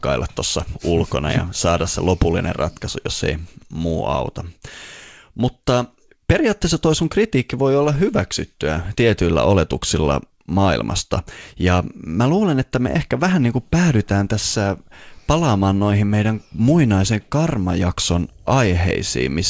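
No technical faults can be heard in this recording.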